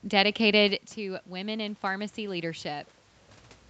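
From 0.96 to 2.92 s there's automatic gain rising. After the voice drops about 13 dB, the gain creeps up about 4 dB, swelling voice and room noise together.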